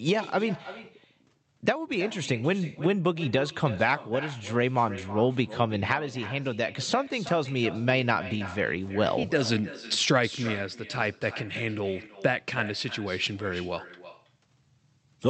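From start to finish the speech carries an echo with no canceller: the far end plays the call on a loudspeaker, its microphone picks it up, and nothing removes that pickup before it returns. Each phrase is shadowed roughly a third of a second later by a thinner copy sitting about 15 dB below the original, the delay being the network round trip. The call path itself shows a top end cut off at 8 kHz, consistent with Opus coding.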